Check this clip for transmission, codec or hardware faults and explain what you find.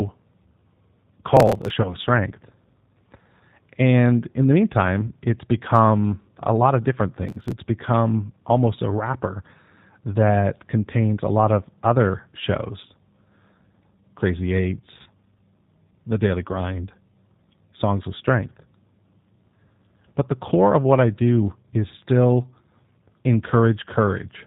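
Three kinds of fault are present: a low-bitrate speech codec across the whole clip, two bursts of processor overload crackle, and three short dropouts covered by the codec's packet loss concealment.

The G.729 codec, here the G.729A variant at 8 kbit/s, colours the entire recording. It rebuilds the speech from a vocal tract filter, a pitch predictor and a few pulses per 10 ms frame rather than sending the waveform itself, so everything above 4 kHz is gone and the voice has a plainly rough, synthetic texture. Because this damage is steady and present from start to finish, it can't be confused with the local events below.

Processor overload crackle appears from 1.37 to 1.71 s and from 7.29 to 7.53 s, the second between "a lot of different" and "become almost a wrapper". The machine repeatedly failed to finish its audio buffers on time. The rapid ticking fits a very short buffer of about a millisecond and a half, and on each miss that slice was simply skipped. 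The result is a gritty, tearing crackle laid over the speech that stops once the load passes. This sets it apart from packet loss, which produces smooth synthetic filler rather than hard-edged clicks.

VoIP packet loss concealed by the speech codec occurs at 1.82 to 1.95 s, at 5.07 to 5.14 s between "in the" and "it's become a lot", and at 15.02 to 15.10 s. About 20 ms of audio was lost in each of the first two and 40 ms in the third, which fits two and four codec frames. The decoder filled each gap by extending its last pitch and filter settings at falling gain, so the voice smears into a brief fading synthetic sound. Because each frame depends on the one before, the speech stays weak or distorted briefly after real data returns. Unlike the crackle, these gaps are smooth, not gritty.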